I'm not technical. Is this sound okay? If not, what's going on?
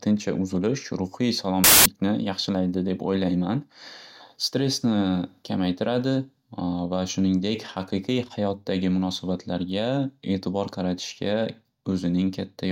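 No, not quite. Right after "uzulish ruhiy", from 1.64 to 1.86 seconds, there's a burst of loud hiss: samples built from the wrong bytes, so the scrambled numbers come out as noise.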